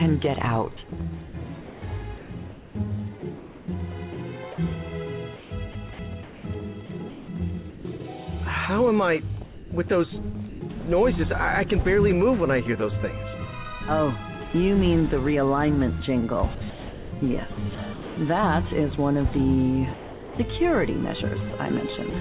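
Sound chopped by the voice detector appears first from 0.89 to 2.30 s, again from 3.20 to 7.85 s and from 9.44 to 10.61 s. The sender's detector likely kept switching transmission on and off, so quieter parts were swapped for comfort noise: about 420 ms, 1.2 s and 390 ms of it in those stretches. The audio turns choppy, all within the 4 kHz upper limit of the narrowband call path.

The same chopping returns from 16.55 to 18.17 s, where roughly 780 ms of fill replaces real sound.

Sound dropped by the voice detector follows from 19.94 to 20.39 s. Here the detector likely judged a quiet passage to be background and stopped sending altogether. For about 450 ms the sound gives way to steady comfort noise and then resumes once the detector triggers again.

Finally, from 21.50 to 22.13 s, a brief chop likely from the same detector inserts about 60 ms of comfort noise.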